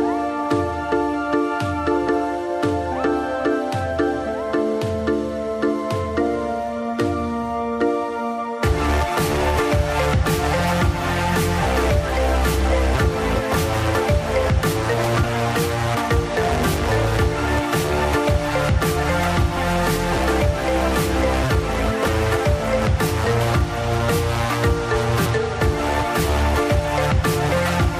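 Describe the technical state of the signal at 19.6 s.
At 19.56 to 19.58 s, compressed frames are skipped. A couple of frames never reach the output, either missing from the file or rejected by the decoder as damaged. The audio jumps ahead by roughly 50 ms.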